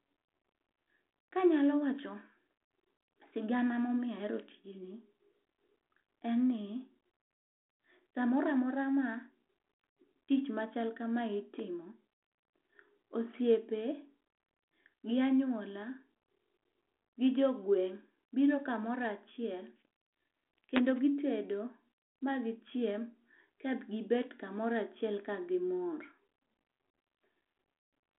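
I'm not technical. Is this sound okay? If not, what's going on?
Yes, listening to it nothing stood out as a problem.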